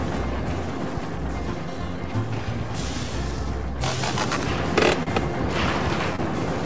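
At 5.03 to 5.10 s there is a short stall from a late packet. A packet arrived after its playout time, so the jitter buffer ran dry. The receiver held the last sound for about 37 ms, then resumed exactly where it had stopped. Nothing is lost. Instead, one sound lingers too long with a faint buzzy, slightly dipped quality, and everything after it plays about 37 ms later than before. That fixed added delay with no dropped material distinguishes it from a loss.

At 6.16 to 6.21 s a short concealed packet loss follows, and this time audio really is gone. About 30 ms never reached the decoder, and the receiver filled the gap with about 24 ms of extrapolated sound before blending back into the real signal. The result is a brief smear or wobble, and any short sound in that span can simply disappear. Unlike the earlier stall, nothing here resumes from the same point. The missing piece is skipped over, not waited for. 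Throughout, nothing sounds above 8 kHz, which fits a G.722 call codec at 64 kbps.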